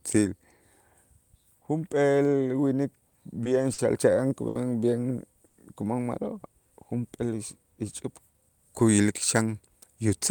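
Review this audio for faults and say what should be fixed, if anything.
Short stalls from late packets occur at 3.08, 3.43, 3.73, 4.48 and 5.47 s. Each time the jitter buffer ran dry, so sound was held for 20 to 70 ms.

A jitter buffer speed-up runs from 8.33 to 9.55 s. Pitch-period pieces, about a tenth of a second in total, were cut, so speech runs 8% faster at unchanged pitch.

To prevent both, size the jitter buffer for the network's actual delay variation and fix the upstream burstiness that makes packets arrive late and then bunched.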